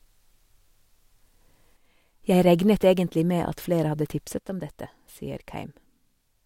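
At 1.77 to 2.24 s, and again from 4.38 s to the end, the speech abruptly drops about 6 dB, likely because one channel drops out before the mono sum. The waveform's envelope steps down sharply, and the spectrogram dims evenly across all frequencies.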